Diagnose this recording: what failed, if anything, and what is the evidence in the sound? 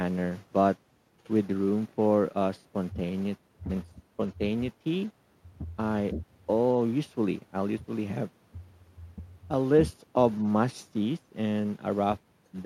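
No fault detected in this recording.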